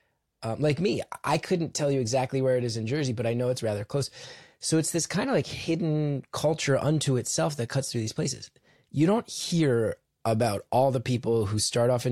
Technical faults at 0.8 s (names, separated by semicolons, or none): none